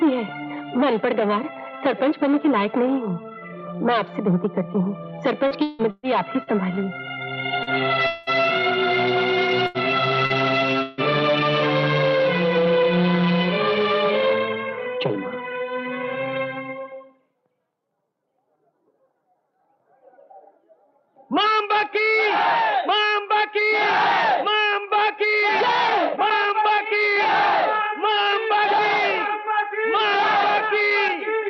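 From 5.47 to 6.5 s the stream suffers repeated packet loss, giving a robotic sound: four separate gaps open up within about a second, the longest 160 ms. Each hole is filled by extending the last sound, and the next one arrives before the audio can settle, so about a third of the stretch is synthetic fill. The result is choppy, with pieces of the sound missing.

At 7.63 to 7.70 s comes a short concealed packet loss. About 40 ms of data missed the decoder, and the receiver bridged it by carrying the previous sound forward, then blended back into the real signal. It is heard as a brief smear or wobble rather than a clear break.

From 8.07 to 8.30 s a long network dropout is the likely cause of what follows. About 200 ms of audio is absent, and the whole gap is filled with a continuation of the last sound, a buzz or hiss that thins out rather than falling silent. The sound resumes further on, with that portion gone.

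At 9.67 to 9.77 s there is a burst of packet loss, about 80 ms in all. The receiver held the last sound and turned it down as the gap ran on, so the moment becomes a held buzz or fading hiss before the audio picks up again, the part in between skipped.

A second short concealed packet loss at 10.26 to 10.33 s drops about 40 ms, patched by the same carry-forward, and heard as a brief smear or wobble.

From 10.82 to 11.01 s another likely long network dropout removes about 160 ms, again bridged entirely by a decaying continuation with no silent stretch, before the sound returns with the lost section missing.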